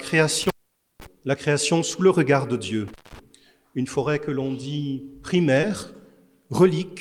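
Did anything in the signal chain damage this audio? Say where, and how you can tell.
Yes. Intermittent contact in the analogue wiring drops the sound at 0.42 to 1.06 s and again at 2.88 to 3.19 s, with the line open for about 0.5 s and 0.19 s. Crackle marks each edge. On a waveform the signal collapses to a low hiss floor, and a spectrogram shows broadband clicks at the boundaries.

Short concealed packet loss at the network stage occurs at 5.61 to 5.65 s. About 20 ms of audio never arrived. The decoder extended the preceding sound for roughly 13 ms, then crossfaded back, heard as a brief smear. A spectrogram shows smoothed, repeated texture there rather than a gap.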